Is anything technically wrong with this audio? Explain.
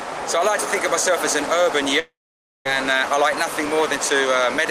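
Yes. From 1.99 to 2.67 s there is a long network dropout, likely. The last sound stretches into a fading buzz, then about half a second of silence. Audio resumes later, with roughly 0.66 s of material simply gone.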